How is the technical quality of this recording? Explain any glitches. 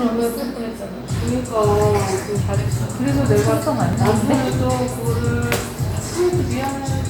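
There is one glitch: an overlap between stream segments at 3.93 s. About 16 ms of sound vanishes where two 4.0 s segments' time stamps overlap, so the waveform jumps straight across, producing a tiny skip. Unlike a dropout, no silent gap is heard.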